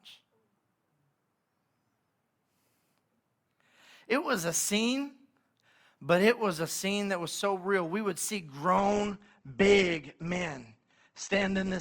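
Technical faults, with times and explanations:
8.77–11.81 s, adaptive stream at a lower bitrate: right after "would see" the speech abruptly turns duller with more codec artefacts and no gap, which fits a switch from about 64 to 16 kbit/s Opus. A spectrogram shows energy above 8.2 kHz cut off sharply from that point to the end.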